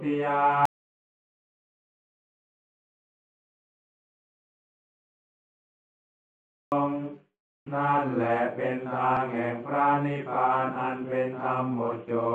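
From 0.65 to 6.72 s, an audio dropout to silence, likely from lost input, leaves a flat-line waveform and blank spectrogram, without room tone.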